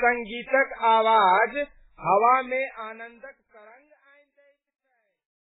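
Heavy MP3 compression runs throughout, likely at around 8 kbps. Nothing remains above 3.8 kHz. Weak frequency lines flicker on and off, so the speech sounds watery and swirly.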